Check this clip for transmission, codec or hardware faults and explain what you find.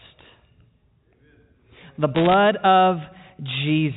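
One fault is audible: bit errors on a digital phone line, from 2.16 to 2.34 s, in speech carried over G.711 telephone coding that keeps everything below 4 kHz.

Across that stretch, roughly one bit in a hundred is flipped, and each flip corrupts a single sample. Flips that land on a high-order bit, or on the sign bit of a loud sample, throw that sample far off, so the speech picks up sharp ticks that sound like crackle. On the waveform they appear as isolated spikes, and on a spectrogram as thin vertical broadband lines.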